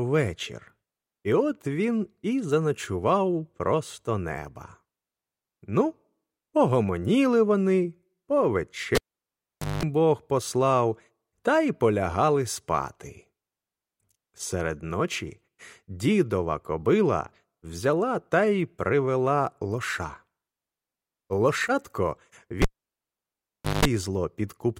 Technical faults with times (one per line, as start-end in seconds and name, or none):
8.95-9.83 cable pulled and plugged in
22.62-23.85 cable pulled and plugged in